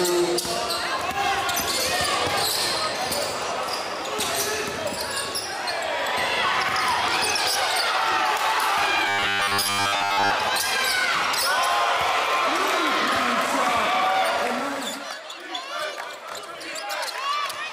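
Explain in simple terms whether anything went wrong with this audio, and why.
Robotic sound from repeated short buffers, from 9.09 to 10.31 s: the audio turns into a metallic buzz pitched at 100 Hz. The likely cause is new audio arriving too slowly, so the player kept looping a 10 ms slice, replacing most of the sound.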